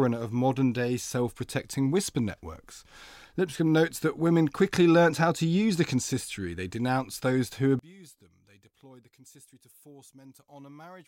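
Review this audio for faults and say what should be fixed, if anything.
From 7.79 s, right after "denounced those who", to the end, the voice drops about 26 dB, likely one channel inverted cancelling in mono. Check polarity per channel before export.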